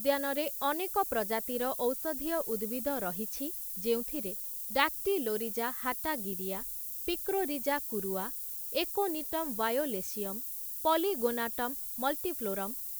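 From start to finish the speech carries low bit depth with noise shaping: six-bit quantisation whose rounding error is pushed upward, giving a thin, steady hiss nearly as loud as the voice. A spectrogram shows a bright noise floor climbing toward the top band, and the waveform looks coarsely stepped.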